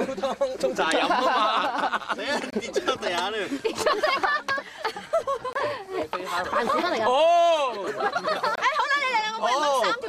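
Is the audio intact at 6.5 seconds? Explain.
Yes, at 6.5 seconds the audio is intact, with no fault of any kind.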